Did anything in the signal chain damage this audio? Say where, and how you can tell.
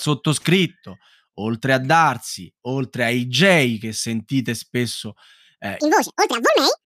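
Yes. From 5.80 s, after "che sentite spesso eh", a section at the wrong speed runs 1.97 times fast and roughly ten semitones high, likely from a playback clock mismatch.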